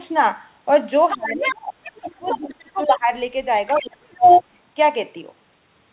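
From 1.1 to 1.53 s, the echo canceller has likely left part of the far end's loudspeaker signal in the microphone feed, so another voice is heard, the other side's voice leaking through, at about 5 dB below the talker. Almost immediately, from 1.16 to 1.79 s, speech is suppressed in double talk: with both sides active, the canceller likely could not tell its own talker from the echo and pulled everything down, so the talker's voice sinks by up to around 30 dB for roughly half a second.

The pattern repeats. From 1.84 to 2.38 s the leaked voice returns at about 10 dB below the talker, and from 2.19 to 3.08 s the talker is pushed down again, by up to around 20 dB over roughly 0.7 s, with a further brief scrap of the other side at 2.77 to 2.95 s, again about 10 dB down. The worst leak runs from 3.67 to 4.43 s, where the other side is about 5 dB louder than the talker, and from 3.82 to 4.42 s the talker drops by up to around 30 dB. 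Through all of this, everything sits below 4 kHz, which fits narrowband G.711 mu-law telephone coding.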